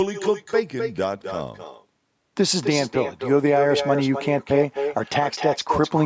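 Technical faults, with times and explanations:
Throughout, echo with no canceller: the far end's loudspeaker feeds its microphone unchecked, returning the speech about a third of a second later, about 6 dB quieter and thin.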